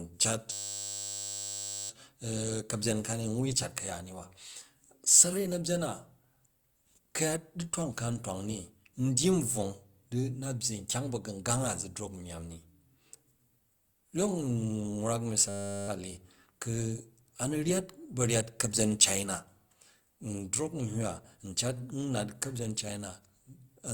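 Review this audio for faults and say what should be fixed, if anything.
A system hang loop occurs twice in this speech clip, from 0.52 to 1.9 s and from 15.49 to 15.88 s. Each time, one 10 ms slice of audio repeats exactly, producing a steady 100 Hz buzz while the driver stalls and the hardware keeps replaying its ring buffer. Little or no audio seems lost afterward. A waveform would show an identical 10 ms pattern tiling the span, and a spectrogram would show flat horizontal lines at 100 Hz multiples. Prevent it by fixing the driver stall and adding a watchdog that mutes the output on underrun.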